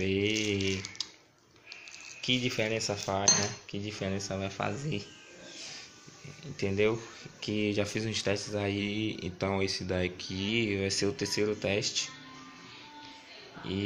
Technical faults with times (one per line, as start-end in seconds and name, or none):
4.60-5.66 drift correction step
8.79-10.48 drift correction step